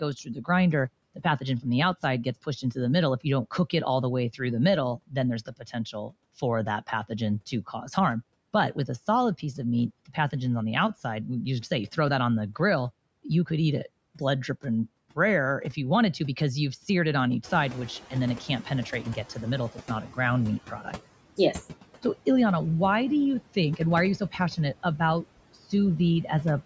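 Noise suppressor artifacts run through the whole speech clip. The suppressor pulls the steady background down by about 18 dB, but it decides band by band and frame by frame. The residue dips in the pauses and swells back under the speech. The band tops out around 8 kHz, as the call microphone path intends.

Speech cut by the noise suppressor first shows at 0.24 to 0.49 s, then at 1.15 to 3.73 s, 4.97 to 6.13 s and 6.82 to 7.89 s. Within each stretch, brief pieces of speech, only a fraction of a second in total, were treated as noise and lowered with the background. The drops reach about 11, 14, 18 and 8 dB respectively. The affected pieces sound swallowed or faded.

The same speech cut by the noise suppressor returns at 14.15 to 15.17 s, between "you could eat it" and "if you wanted to". It briefly dips the speech by up to about 14 dB, so a small piece between those phrases goes faint.

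Noise suppressor catching up occurs at 17.43 to 17.99 s, right after "seared it on each". There the room noise jumps by about 13 dB. The suppressor's noise estimate lags behind, so the louder background first comes through with only about 9 dB of reduction. Over roughly 560 ms it adapts and the noise sinks back down.

Speech cut by the noise suppressor appears again at 18.11 to 21.39 s, with drops of about 12 dB. This time under a background now only about 16 dB below the speech, some brief speech pieces go faint with the noise. The last occurrence, 23.54 to 26.29 s, follows "why do you". The speech again dips by up to about 12 dB for short moments, leaving those pieces faint.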